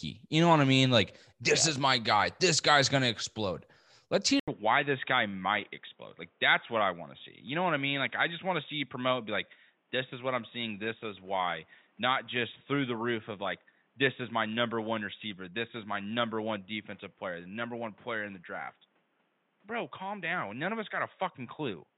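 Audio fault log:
4.40–21.97 s, input switched to a poorer device: the input likely jumped to a narrower-band microphone or headset profile, so after an 80 ms gap the speech loses everything above 3.8 kHz, turns boxy, drops a few decibels and picks up faint new noise.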